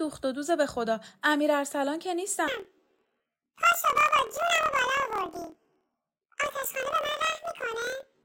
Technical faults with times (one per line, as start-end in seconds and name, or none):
2.48-8.24 planar audio read as interleaved